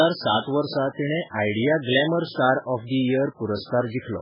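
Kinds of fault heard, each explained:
MP3 compression: The speech sounds watery and swirly, with nothing above about 5.2 kHz, which is likely a heavily starved MP3 encoder lopping off the treble and flickering weak detail in and out, pointing to a very low bitrate, down around 8 kbps.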